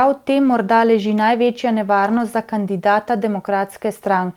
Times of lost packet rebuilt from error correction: 0.43-0.49, 2.05-2.19

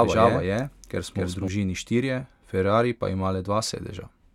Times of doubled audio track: 0.00-1.48

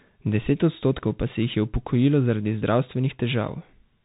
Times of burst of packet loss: none

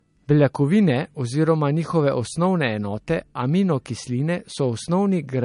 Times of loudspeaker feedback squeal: none

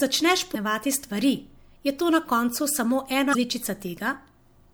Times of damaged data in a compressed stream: 0.51-0.56, 3.31-3.35

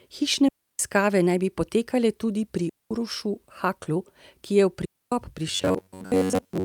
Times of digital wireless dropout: 0.48-0.79, 2.69-2.91, 4.85-5.12

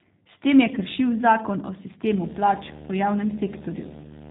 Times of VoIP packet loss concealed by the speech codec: 0.75-0.80, 4.00-4.21

